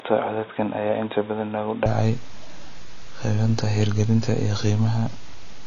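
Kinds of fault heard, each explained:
AAC compression: The whole clip was likely passed through a low-bitrate AAC-LC encoder, which quantises frequency lines coarsely against a hearing model to save data. Here that leaves nothing above 7 kHz, so the speech sounds dull, and the coding damage is plainly audible as a smeared, warbling or fizzy texture on sustained sounds and sibilants, which fits a bitrate around 24 kbps.
Input switched to a poorer device: For the opening stretch, 0.0 to 1.86 s, the recording likely came through a worse input, such as another microphone or a headset call profile, before switching over. That device passes nothing above 3.8 kHz, so the speech there sounds boxy and narrow, somewhat quieter, with its own background noise well below the speech. At 1.86 s the sound clears up at once, with no silence at the switch.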